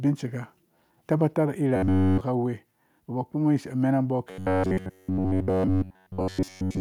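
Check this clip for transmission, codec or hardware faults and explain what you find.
There's one fault here, and it turns up twice: robotic sound from repeated short buffers, from 1.76 to 2.21 s and again from 4.31 s through to the end. The speech collapses into a rigid metallic buzz at about 94 Hz, still loosely tracking the words. That's likely a starved buffer looping roughly the last 11 ms over and over, so essentially everything in those stretches is repeats rather than fresh audio.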